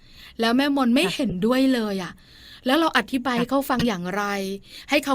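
At 1.29 to 1.33 s and 3.78 to 3.86 s, a corrupt frame decoded: a couple of damaged frames, each time, misplace energy. Each gives a short burst or chirp.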